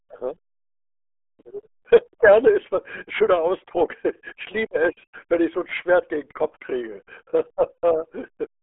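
Speech, muffled and gargly throughout from the RealAudio 14.4 codec. A spectrogram shows nothing above 3.8 kHz, which fits heavy 8 kbit/s speech coding.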